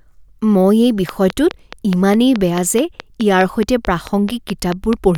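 A train of clicks runs from 1.09 s, right after "মই এই", to 5.16 s over this speech, about 4.7 evenly spaced pops per second, roughly twenty, standing out well above the voice, likely from nearby interference or a faulty connection.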